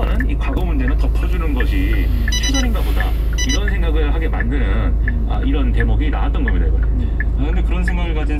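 A background task is stalling the USB bus or audio driver once a second, producing periodic USB or driver dropouts in this everyday-sound recording. From 4.34 to 7.35 s, about four tiny slivers of audio, each a fraction of a millisecond, are skipped, leaving evenly spaced ticks in the sound.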